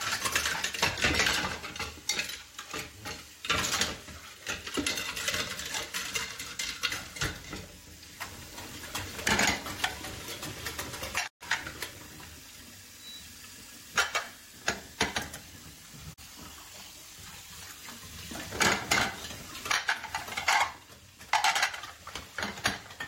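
Digital broadcast dropouts occur at 11.26 to 11.43 s and 16.12 to 16.20 s: the receiver stopped getting valid frames and muted, fading out over 20 ms. About 128 ms, then 32 ms, of sound vanish, consistent with 32 ms frames.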